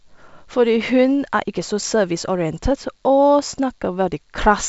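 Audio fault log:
Nothing to log here: the speech comes through G.722 wideband telephone coding at its full 64 kbit/s rate, where any coding trace stays faint at most, so there's no fault to note.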